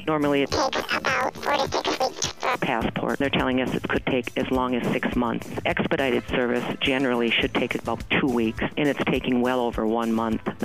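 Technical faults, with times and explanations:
0.46 to 2.56 s, planar audio read as interleaved: the sound jumps an octave high with a fast 38.3 Hz flutter. Each 26.12 ms block stores all left samples, then all right, but is read as alternating pairs, so it plays twice at double speed.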